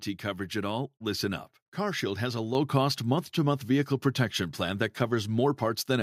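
At 2.55 s the microphone volume is stepped up. The input gain rises about 5 dB in one jump, so speech and background get louder together.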